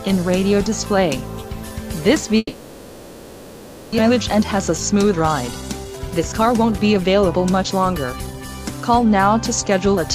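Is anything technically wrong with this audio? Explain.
Yes, there are two faults.

From 2.37 to 4.00 s there is a long network dropout, likely caused by packets failing to arrive for over a second. The receiver stretches the last sound into a fading buzz for roughly 1.6 s, with only a brief near-silent gap of about 30 ms. When the audio resumes, about a second of material is gone and playback sits around half a second later. On a spectrogram, the harmonics smear into a decaying, featureless band. The waveform shrinks to a low envelope before normal detail returns abruptly.

From 4.08 to 8.49 s a jitter buffer speed-up follows. The buffer is now holding more audio than it aims for, so the receiver repeatedly cuts out short pitch-period-length slices to catch up. Playback runs at about 112% speed with the pitch unchanged, and it sounds hurried. Around half a second is removed in total. On a spectrogram, events look compressed in time while the harmonic spacing stays the same. 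The waveform shows periodic cycles spliced together at the cut points.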